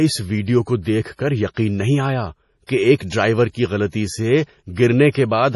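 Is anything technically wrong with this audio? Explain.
Yes. Throughout the speech, the sound is watery and swirly, with nothing above 11.4 kHz. This is likely MP3 compression at a low bitrate, and the damage is heavy. The encoder had too few bits, so it cut the treble at a fixed point and dropped weak frequency lines, and those lines flicker on and off from frame to frame. S sounds turn chirpy and metallic. On a spectrogram this shows as a hard ceiling at 11.4 kHz, with patchy, blocky holes below it that come and go.

Pre-echo occurs at 2.66 s (25 ms), 2.96 s (41 ms), 3.10 s (23 ms) and 5.10 s (46 ms). In each case a sharp attack falls late in a transform block. The noise sized for the loud onset spreads back into the quiet moment before it, so a short hiss leads each attack and the attack itself sounds smeared. A waveform shows a low fuzzy skirt just ahead of each onset, and a spectrogram shows broadband smear leading the transient.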